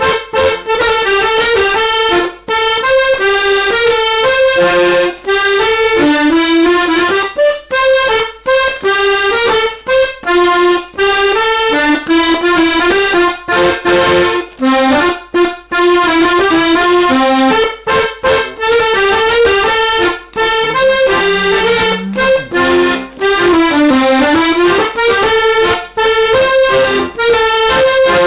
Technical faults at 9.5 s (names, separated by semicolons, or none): aliasing